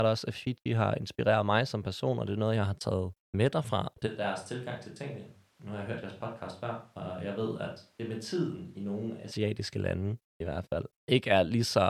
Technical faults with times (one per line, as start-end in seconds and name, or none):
4.08-9.30 switch to a distant microphone